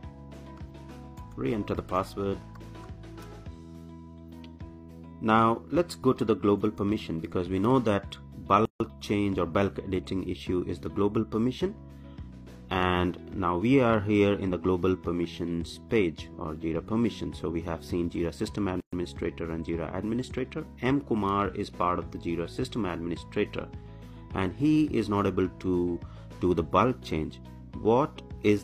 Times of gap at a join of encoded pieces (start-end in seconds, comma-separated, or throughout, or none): 8.65-8.80, 18.80-18.93